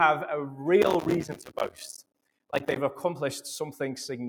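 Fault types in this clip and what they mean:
Noise suppressor applied to music or sounds: Across the whole clip the level breathes and pumps, with sustained parts and decaying tails sinking while sharper onsets come through more fully, a swing of roughly 5 dB. A noise suppressor designed for speech was left active. It treats steady tones, ambience and reverberant tails as noise and pulls them down, so the sound thins out and flutters wherever energy is held rather than struck.
Processor overload crackle: From 0.82 to 2.77 s a gritty, tearing crackle rides over the sound, made of many tiny dropouts where the audio briefly falls to silence with hard edges on each side. The processor could not finish its short audio buffers, a few milliseconds each, before their deadlines, and it kept missing them over this stretch. Every miss left a small silent gap, and the rapid run of gaps fuses into crackle that stops once the load eases.
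Sound cut by the noise suppressor: Between 1.33 and 1.78 s part of the sound is pushed down much harder than its surroundings, falling by up to about 18 dB for roughly a third of a second in total. It sounds as though the sound is briefly swallowed or its decay chopped off early. The noise suppressor mistook this material for background noise and attenuated it heavily.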